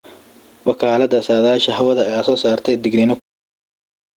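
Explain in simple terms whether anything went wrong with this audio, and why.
Gain pumping runs through the whole clip. Loud and quiet moments end up squeezed to a similar level, which makes the speech sound flattened. The likely cause is a microphone level set far too high, with an automatic limiter pulling it down on every loud sound. The clean fade-out ending at 3.21 s is deliberate.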